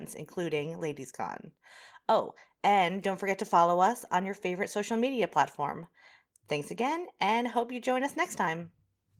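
No faults; the speech shows only the light coloration expected of Opus voice compression at a moderate bitrate, and nothing further.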